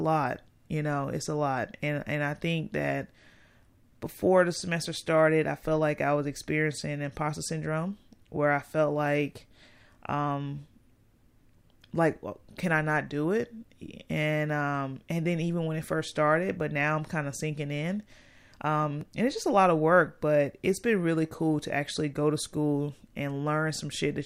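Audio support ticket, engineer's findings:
Repeated buffer at 19.01 s in speech. Output device missed a delivery and replayed its last block once. About 1.33 ms of sound played twice, which fits a 64-sample buffer. Hard joins at each repeat. Too short to stutter; heard as a click or brief buzz. Essentially no audio lost, only delayed. Probable component: playback buffering or driver scheduling under load.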